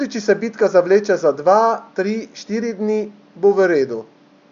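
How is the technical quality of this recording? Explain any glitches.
No glitches or technical faults can be heard here.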